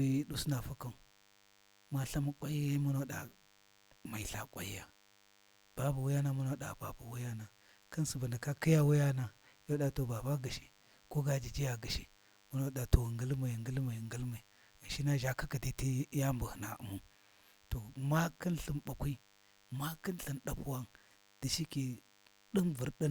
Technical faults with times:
0.00-23.10 DECT cordless phone buzz

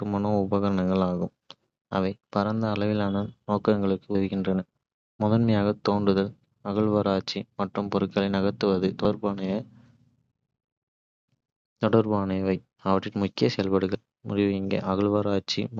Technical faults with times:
4.15 audio missing between chunks
9.05 audio missing between chunks
13.95 audio missing between chunks

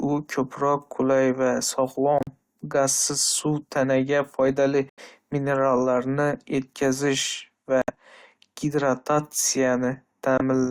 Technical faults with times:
2.18-2.29 corrupt frame muted
4.89-5.00 corrupt frame muted
7.82-7.90 corrupt frame muted
10.38-10.42 corrupt frame muted

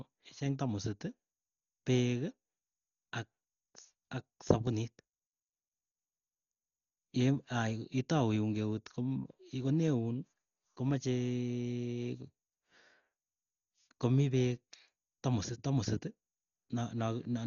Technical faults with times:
0.00-17.46 Dolby Digital compression

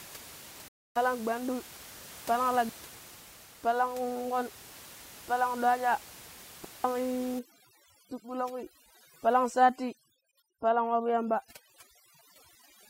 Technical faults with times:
0.68-0.97 Bluetooth stall
2.69-2.93 digital wireless dropout
6.64-6.84 digital wireless dropout
7.39-12.89 overdone noise removal

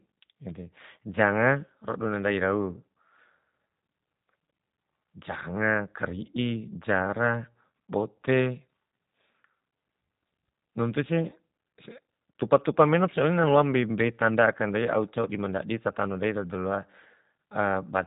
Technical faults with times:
0.00-18.06 G.729 codec

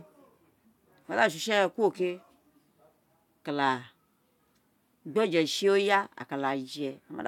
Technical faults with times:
none

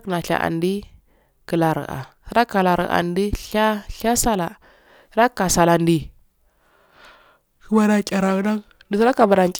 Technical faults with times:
7.71-9.60 periodic clock jitter

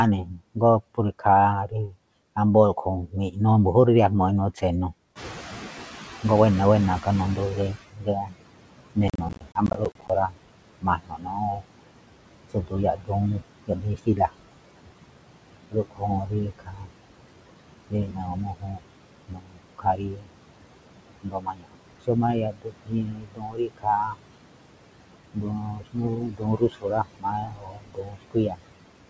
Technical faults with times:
0.00-29.10 noise suppressor artifacts
0.23-1.96 speech cut by the noise suppressor
3.07-3.37 speech cut by the noise suppressor
4.56-4.93 speech cut by the noise suppressor
5.15-7.84 noise suppressor catching up
6.23-14.31 speech cut by the noise suppressor
9.08-10.10 processor overload crackle
15.71-16.92 speech cut by the noise suppressor
17.90-20.32 speech cut by the noise suppressor
21.23-24.38 speech cut by the noise suppressor
25.34-28.62 speech cut by the noise suppressor

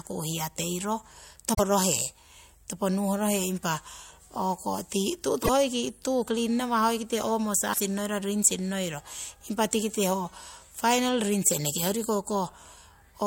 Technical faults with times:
1.50-1.60 damaged data in a compressed stream
5.40-5.49 damaged data in a compressed stream
7.69-7.80 damaged data in a compressed stream

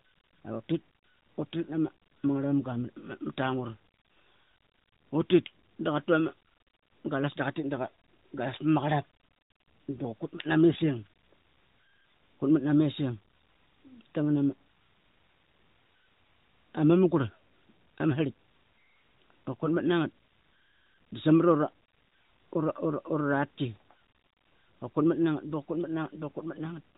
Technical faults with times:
10.70-10.83 AMR bit errors
19.63-19.69 AMR bit errors

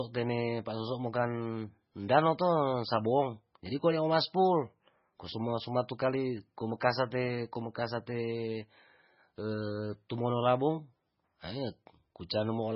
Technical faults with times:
0.00-12.76 MP3 compression
2.08 pre-echo

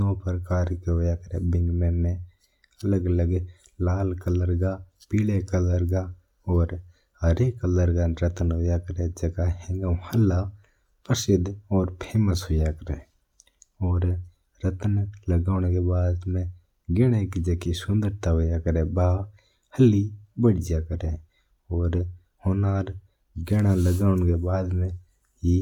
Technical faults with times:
none

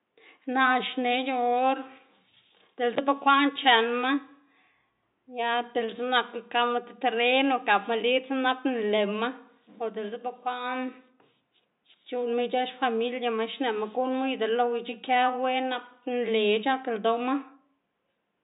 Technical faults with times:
none

